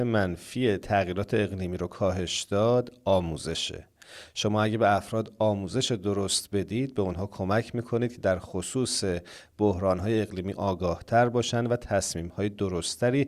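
No technical faults can be heard anywhere in the recording.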